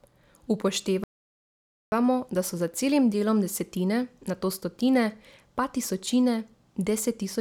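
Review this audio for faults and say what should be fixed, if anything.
The player most likely ran short of buffered data, or had its playback thread blocked, and produced nothing until it recovered: a playback stall. In this speech clip the sound cuts out mid-flow at 1.04 s and stays silent for about 0.88 s, resuming at 1.92 s. To fix it, give the player a deeper buffer and keep audio output on a high-priority thread that other work cannot block.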